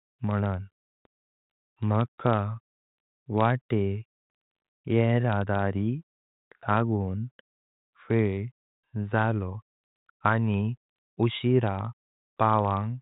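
Nothing technically wrong can be heard in this speech recording. It has passed through G.726 ADPCM coding at 40 kbit/s, which leaves nothing above about 3.8 kHz and at most a faint trace of coding noise.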